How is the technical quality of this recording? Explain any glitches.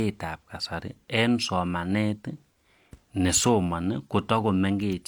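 The recording's quality is limited by one fault present for the whole clip: low-bitrate audio saved at a high bitrate. The speech carries the artefacts of a lossy encoding, which likely come from an earlier low-bitrate pass (something like HE-AAC at around 48 kbit/s) later re-saved as a roomy MP3 (about 256 kbit/s). The larger file cannot restore detail the first encoder discarded. On a spectrogram, the upper bands look blotchy and patchy, with nothing above about 20.1 kHz.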